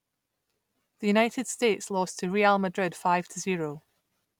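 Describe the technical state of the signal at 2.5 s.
At 2.5 s the signal is intact, with no dropout, clipping, glitch or other fault audible in the speech there.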